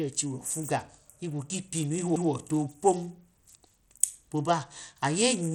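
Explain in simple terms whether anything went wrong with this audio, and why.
Two things went wrong. The first runs through the whole clip. The speech sounds dull and gritty. The high, crisp sounds drop out or flicker, and a rough, sandy noise clings to everything. This is most likely Bluetooth SBC compression. SBC is the basic codec Bluetooth uses to squeeze audio. It splits sound into a few wide frequency bands and shares out a limited data budget. The faint top bands get little or nothing, so the treble suffers first.

The second is a CD skip at 2.16 s. You hear a tiny tick and a split-second gap of silence, about 3 thousandths of a second. Then the speech carries on from a different point, as if a small piece jumped. A knock or a flaw on the disc made the laser hop to another turn of the disc's spiral track. The player went quiet for an instant and picked up from the wrong place.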